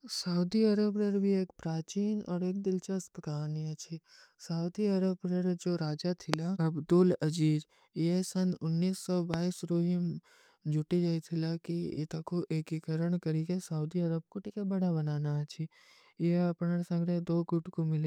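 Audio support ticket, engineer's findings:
Loud pop at 6.34–6.36 s, single, peaking about 25 dB above the speech; second loud pop at 9.34–9.36 s, single, about 20 dB above. Likely cause: a voltage step from a plug, switch, static discharge or driver glitch, shaped into a brief thump by downstream circuitry. Unlike a dropout or buffer glitch, nothing is lost: the speech carries on unbroken beneath each pop, and there is no periodic repetition.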